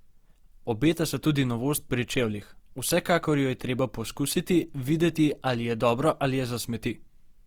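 Throughout, the speech sounds grainy and rough but not swirly like MP3, likely Opus compression in music mode around 24 kbps, still reaching 20.2 kHz.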